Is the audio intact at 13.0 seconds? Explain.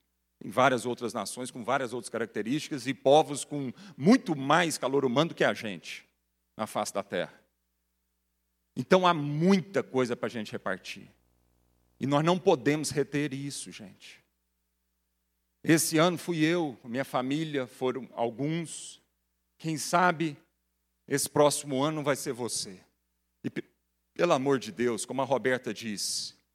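No. At 13.0 s the speech carries video or display buzz, which runs from 10.57 to 13.90 s, starting just after "coisa para a gente". A screen or its video cable is leaking into the audio path, imposing a faint rasping buzz at the 60 Hz picture field rate, well beneath the speech. Mains hum is a smooth tone with steady harmonics. This buzz has a harsher, edgier pulse with hash riding above it.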